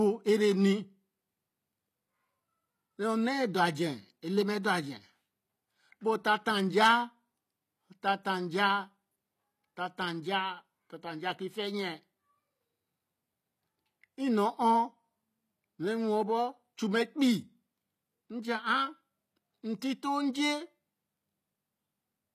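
HE-AAC compression runs throughout the speech, and it is plainly audible. The treble sounds rebuilt rather than captured, likely by spectral band replication at a low bitrate near 24 kbps, leaving s sounds gritty and lispy, with nothing above 14.9 kHz.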